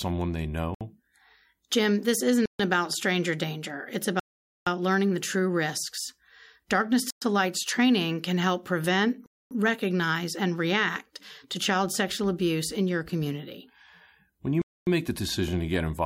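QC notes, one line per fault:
0.75–0.81 s, 2.46–2.59 s, 4.20–4.67 s, 7.10–7.22 s, 9.26–9.51 s, 14.62–14.87 s: Bluetooth stall. The likely cause is wireless packets being held up until resends arrived, leaving the headphone buffer empty, so the speech drops to dead silence for 63 ms, 138 ms, 470 ms, 113 ms, 247 ms and 252 ms before resuming. These gaps fall between "this isn't" and "about stranger danger", just before "learning the true risks", and between "training can help prevent" and "recognize and react to".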